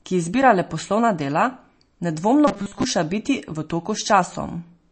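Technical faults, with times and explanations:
Throughout: MP3 compression. The encoder, likely starved of bits at a rate that fits about 32 kbps, cuts everything above 8.3 kHz and drops weak frequency lines frame to frame, so the speech sounds dull, watery and swirling, with plainly audible smeared consonants.
2.48 to 2.84 s: robotic sound from repeated short buffers. New audio likely arrived too slowly, so playback looped a 5 ms slice for most of this stretch, imposing a rigid 200 Hz metallic buzz on the speech just before "biti v".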